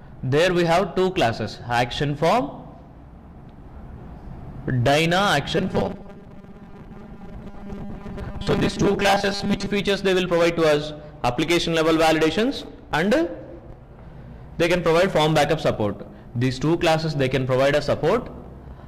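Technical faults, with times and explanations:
5.58 to 9.71 s, robotic sound from repeated short buffers. The sound turns into a rigid, metallic buzz at 200 Hz that only loosely tracks what came before. The likely cause is fresh audio arriving too slowly, so playback kept looping the most recent short slice instead of waiting. A 200 Hz buzz fits a slice about 5 ms long. Roughly half of the span is such repeats, and the audio they replace is lost.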